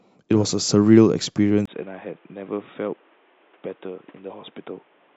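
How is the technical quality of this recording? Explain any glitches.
The recording degrades partway through. At 1.66 s, after a brief dropout of about 20 ms, the speech turns dull and boxy and stays that way to the end. This is most likely an input switched to a poorer device, such as a fallback microphone or a headset call profile, whose narrower band passes nothing above 3.8 kHz. The level drops by roughly 5 dB, and a new background noise sits around 30 dB below the speech.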